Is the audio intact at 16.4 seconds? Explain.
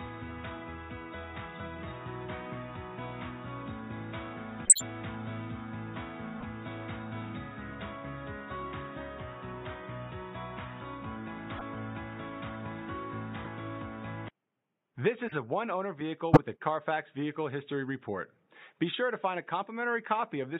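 No. A short, loud chirp-like burst at 16.33–16.39 s is a corrupt frame decoded: flipped bits in a couple of compressed frames misplaced energy across frequencies.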